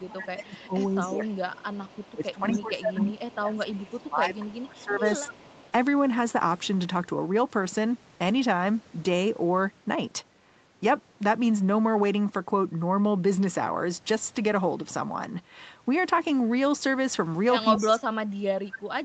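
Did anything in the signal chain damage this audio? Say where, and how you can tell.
Yes. The speech dips from 0.0 to 5.53 s (about 20 dB) and 17.83 to 19.04 s (about 35 dB), likely speech suppressed in double talk by call processing.

A faint copy trails 256 ms behind at 0.86–2.57, 3.16–3.99, 4.68–5.71 and 17.76–17.85 s, about 15–30 dB down, likely echo leak past the echo canceller.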